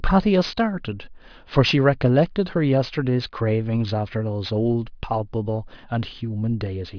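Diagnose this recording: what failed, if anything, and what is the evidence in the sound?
Aliasing runs throughout the clip, introduced at the sample-rate conversion stage. Sibilants come out gritty and metallic, and energy runs hard up to a band edge near 5.5 kHz, folding back into unrelated frequencies at roughly 20 dB below the speech. This points to a drop from 24 kHz to 11 kHz without an anti-aliasing low-pass, so content above the new 5.5 kHz limit mirrored back down into the audible band instead of being removed.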